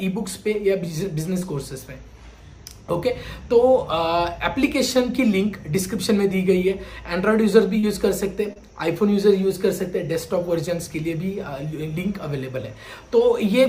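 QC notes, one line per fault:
1.39–1.43 s, 7.79–7.85 s and 8.53–8.60 s, short concealed packet loss: roughly 20, 40 and 20 ms of audio arrived too late, so the receiver extended the preceding sound across each gap and crossfaded back, leaving brief smears; at 8.53 s about 15 ms went missing outright.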